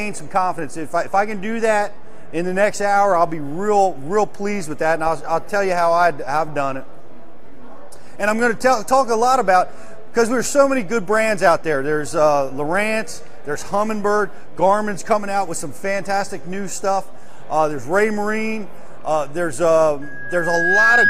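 A DC offset runs through the whole clip. The waveform sits shifted away from zero by a constant amount, about -25 dBFS. You cannot hear it as a sound. It eats into headroom, because one side of the waveform has less room before clipping. On a spectrum it appears as steady energy at the very bottom, at 0 Hz. It is present from the first sample to the last.

At 20.02 s a loudspeaker feedback squeal begins and lasts until the clip ends at 21.09 s. A microphone is picking up the loudspeaker it feeds. At 1.6 kHz the loop gain goes above one, so that tone feeds itself and grows. It swells over roughly 0.7 s into a single sustained squeal. It settles a few dB above the rest of the audio.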